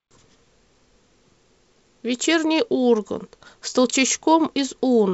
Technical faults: none

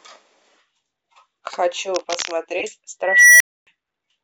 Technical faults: cable scratch noise; corrupt frame decoded; unstable filter

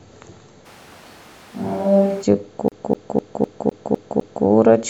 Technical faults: switch to a distant microphone; CD stuck on one turn

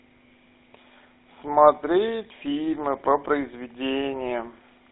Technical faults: GSM full-rate codec

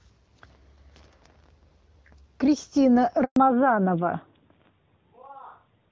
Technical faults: handover gap; fallback to narrowband

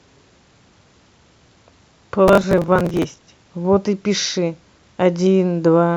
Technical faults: processor overload crackle

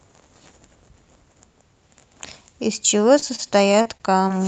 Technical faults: repeated packet loss (robotic sound)

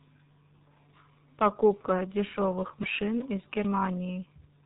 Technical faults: G.723.1 codec; dropped buffer (overrun)

